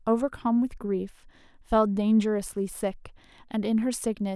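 No technical faults are audible anywhere in the speech recording.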